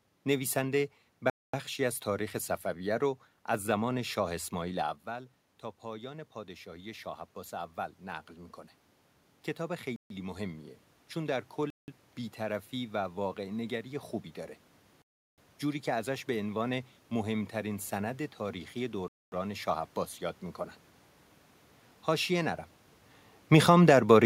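Speech with room noise in the background, interrupted by five clean gaps of silence at 1.30 to 1.54 s (0.24 s), 9.96 to 10.10 s (0.14 s), 11.70 to 11.88 s (0.18 s), 15.02 to 15.38 s (0.36 s) and 19.08 to 19.32 s (0.24 s). These are likely Bluetooth stalls, where delayed packets let the headphone buffer run empty so playback pauses. Unlike a dropout that loses material, the audio halts and then resumes, while a burst of noise or distortion would fill the gap instead of leaving it silent. The automatic gain rising shows twice. Just after 5 s the talker moves away and the input falls by about 12 dB. From 5.06 to 8.61 s the gain climbs by about 5 dB, recovering only part of that loss. A second rise of about 4 dB runs from 9.57 to 13.93 s. What separates this from a talker drifting closer is that the room noise swells along with the voice, gradually, over several seconds.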